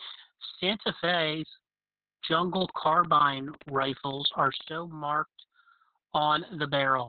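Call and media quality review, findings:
Opus voice compression, throughout: SILK-only narrowband coding, band capped near 4 kHz, coarse excitation. Sound muffled, hoarse, slightly robotic from start to end. Damage level fits a very low bitrate, around 6 kbps, and long 60 ms frames.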